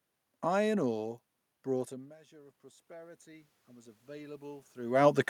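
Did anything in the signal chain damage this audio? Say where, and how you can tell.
Yes. The call processing's automatic gain rising fault appears: after the input fell by about 24 dB, as the talker moved back near 2 s, the gain control climbed about 10 dB from 1.88 to 4.75 s. Voice and room noise swell together gradually.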